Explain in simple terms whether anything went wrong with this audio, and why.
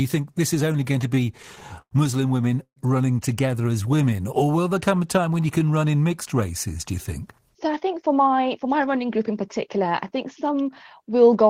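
Between 0.84 and 1.94 s the speech catches and drags in eleven small hiccups, the longest about a tenth of a second. These are repeated stalls (stutter): the data kept arriving late, the buffer kept running dry, and each time the receiver stretched the last sound until more arrived. Nothing is lost.

From 2.63 to 2.79 s the sound briefly hangs on a fading buzz or hiss that drops into silence for about 90 ms, then carries on where it stopped. This call audio freeze is likely from data held up on the way, adding a short gap.

After "women running", from 3.62 to 5.66 s, the speech slows to about 91% of normal speed without any pitch change, with drawn-out sounds, until "run in mixed races". This jitter buffer slow-down repeats tiny slices of sound to rebuild a reserve, adding about 0.19 s.

After "races do you think", from 7.41 to 11.19 s, the speech sounds hurried, running at about 107% speed at the same pitch. 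This jitter buffer speed-up trims tiny slices, around 0.3 s in all, because too much audio had piled up waiting.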